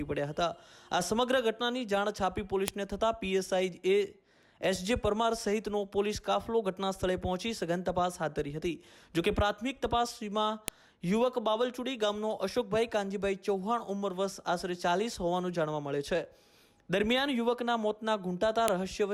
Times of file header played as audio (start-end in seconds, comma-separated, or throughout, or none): 2.68, 10.68, 18.68